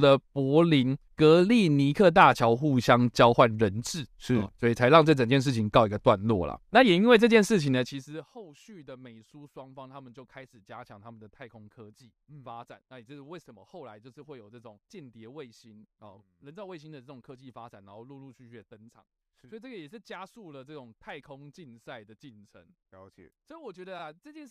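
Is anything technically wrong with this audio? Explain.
No, nothing in this speech recording is technically at fault. The level rises and falls smoothly here and there, the way a fader moves, and those changes come across as deliberate and even.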